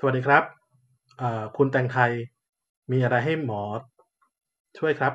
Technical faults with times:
none

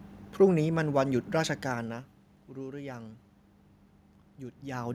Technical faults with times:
none

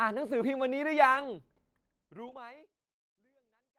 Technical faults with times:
1.15-1.25 lost packet rebuilt from error correction
2.27-2.37 lost packet rebuilt from error correction

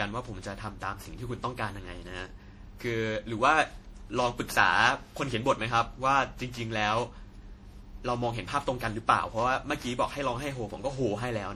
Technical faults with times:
0.00-11.55 generation loss

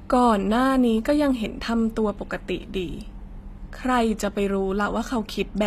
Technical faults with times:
0.00-5.67 HE-AAC compression

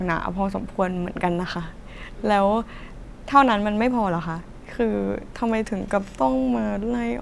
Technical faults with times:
none

